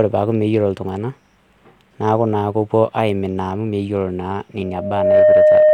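At 4.6 s a loudspeaker feedback squeal sets in and runs to the end of the speech clip. The microphone is picking up the loudspeaker it feeds, and at 612 Hz the round-trip gain exceeds unity, so that frequency reinforces itself on every pass. It swells over roughly half a second into a steady, piercing tone that ends up about 10 dB louder than the speech beneath it.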